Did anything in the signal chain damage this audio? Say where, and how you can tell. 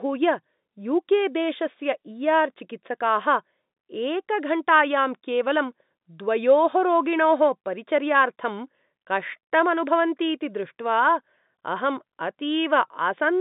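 No, the speech arrives through ordinary telephone coding consistent with 64 kbps G.711 mu-law, with the line band running from about 150 Hz to 3.7 kHz and nothing above 3.8 kHz, and no stage of the chain leaves any audible mark beyond that narrow bandwidth and at most a faint, level-following coding grain.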